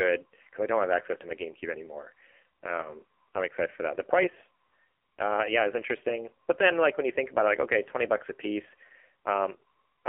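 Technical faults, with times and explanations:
throughout: AMR narrowband mobile codec. The speech passed through a narrowband mobile coder that models the vocal tract and drives it with sparse pulses, at a low rate fitting about 5.9 kbps. The band runs only 300 Hz to 3.4 kHz, and the heavy damage leaves a buzzy, synthetic voice.
2.82 to 2.94 s and 9.56 to 9.63 s: lost AMR speech frames. The decoder covered corrupted frames by reusing its last pitch and vocal tract settings at falling gain. The first sounds like a single lost 20 ms frame, a brief dip or warble. The second sounds like about 60 ms, a smeared fade before the voice returns weak or rough.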